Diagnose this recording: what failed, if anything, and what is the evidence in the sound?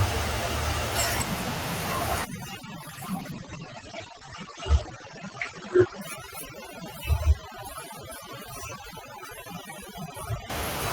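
Overdone noise removal runs from 2.25 s to 10.50 s, in the call-processing stage. A suppressor set far too aggressively clamps bands it judges to be noise, so the room noise, sitting about 24 dB under the speech, collapses into twinkling specks while quiet parts of the voice go with it.

A call bitrate drop sits at 2.83 s to 6.07 s, at the codec. The bandwidth estimate fell, forcing the encoder from 40 kbps to 12 kbps for about 3.2 s, coarsening the speech and narrowing the band from 20 kHz to 8 kHz, so it sounds muffled and rough until recovery.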